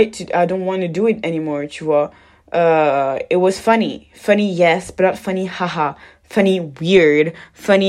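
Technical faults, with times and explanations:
Nothing stood out as a technical problem on listening to this speech clip.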